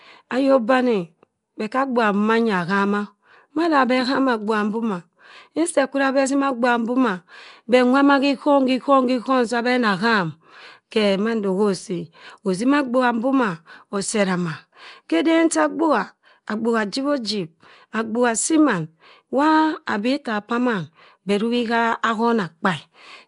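Nellymoser compression runs through the whole clip, from start to finish. The speech carries a rough, hissy halo and a smeared, underwater quality, and the damage is plainly audible. Nothing remains above 10.6 kHz. The likely cause is the Nellymoser Asao codec used for Flash microphone audio, which codes short blocks with a fixed, small bit budget, drops the weaker bands and fills them with noise. The sound fits a stream of about 44 kbps.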